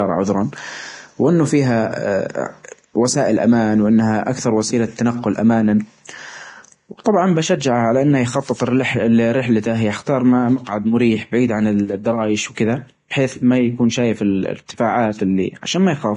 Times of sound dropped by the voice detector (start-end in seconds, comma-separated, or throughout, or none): none